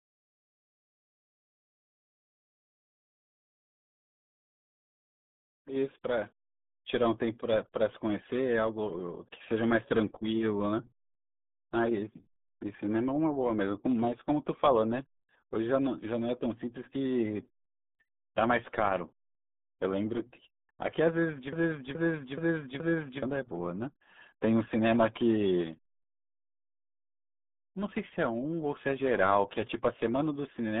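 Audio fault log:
throughout: RealAudio 14.4 codec. The speech is muffled and gargly, with nothing above 3.8 kHz, which fits an 8 kbit/s dial-up codec rather than a clean phone-band filter.
21.53 to 23.23 s: broken-record loop. An identical 0.42 s piece repeats four times back to back, likely a stalled stream resending its last fragment. Unlike an echo, nothing decays or overlaps.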